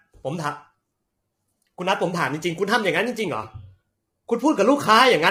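Low-delay AAC compression throughout: short frames smear pitch harmonics, leaving the speech heavily rough and grainy with noise between harmonics, likely AAC-ELD near 24 kbps.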